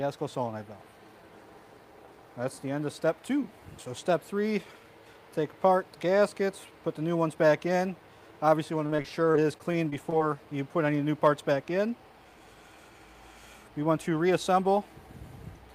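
From 8.79 s to 10.22 s the audio breaks into choppy, robotic fragments: repeated packet loss. Roughly a dozen short holes, the longest about 27 ms, are each patched by stretching the preceding sound, about 220 ms of fill in all, while another 140 ms simply drops out. Concealment covers about 15% of the stretch. Unlike a single dropout or one concealed gap, the patches recur every fraction of a second, giving a choppy stutter rather than one isolated click or silence.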